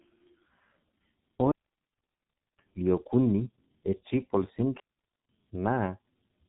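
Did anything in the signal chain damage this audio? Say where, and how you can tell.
Yes. The codec stage did the most lasting damage: the whole clip passed through the G.723.1 codec, a low-rate telephony coder with heavy damage. Throughout the 6-second clip, nothing is left above 3.8 kHz, so the speech sounds muffled, with blurred consonants and a hoarse, rough texture. That comes from a coder that models the voice in coarse 30 ms frames and updates the model slowly, which fits a bitrate of roughly 6 kbit/s.

A digital wireless dropout at the transmission stage cuts the sound from 1.52 s to 2.59 s, a hole of about 1.07 s. The wireless receiver lost too much data, so it muted the output with a very quick fade rather than pass corrupted audio. The result is a clean gap of near silence, with no noise burst, crackle or garbled fragment at either edge. That clean muting is what marks it as a digital link dropout rather than an analogue fault.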